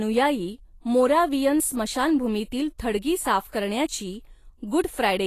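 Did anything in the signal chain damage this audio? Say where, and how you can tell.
Yes. Throughout the speech, the treble sounds hissy and grainy, sibilants smear into a noisy wash, and consonant attacks are blurred rather than crisp. Nothing is present above about 14.2 kHz. At the codec stage, this is likely Vorbis compression at a low setting, consistent with a bitrate near 34 kbps: the encoder trimmed the top band and quantised the remaining high-frequency residue so coarsely that fine detail became noise of similar energy.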